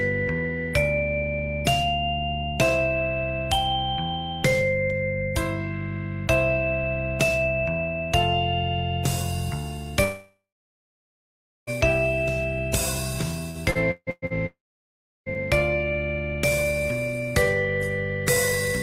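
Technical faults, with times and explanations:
10.03–11.70 s, long network dropout: about 1.64 s of audio is lost. The last sound is stretched into a brief fading buzz, then about 1.26 s of near-silence follows before the audio resumes further on. A single continuous hole, likely from a network outage, sets it apart from choppy packet loss.
13.51–14.33 s, repeated packet loss (robotic sound): five separate gaps, the longest 157 ms, are each patched by extending the preceding sound. That concealment covers nearly half of this stretch, giving a choppy texture instead of one clean silence.
14.46–15.29 s, long network dropout: about 0.8 s goes missing. A short fading continuation gives way to roughly 0.7 s of silence, then the audio returns without the lost portion. Again a single unbroken gap rather than rapid repeated holes.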